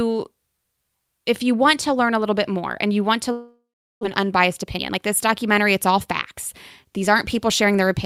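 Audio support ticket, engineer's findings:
Long network dropout, 3.31 to 4.05 s. Last sound stretched into a fading buzz, then about 0.38 s of near silence. Resumes with roughly 0.4 s of speech gone. Likely packet loss on the network path. Receiver concealment filled the gap, then gave up. Playout delay grew by around 0.3 s.

Jitter buffer speed-up, 4.19 to 6.33 s. Speech runs at 110% speed, pitch unchanged, sounds hurried. Receiver cut short pitch-period pieces repeatedly to drain the built-up delay. Roughly 0.2 s removed.

Jitter buffer speed-up again, 6.84 to 7.81 s. Milder, 107% speed. Same pitch-period trimming. About 70 ms removed.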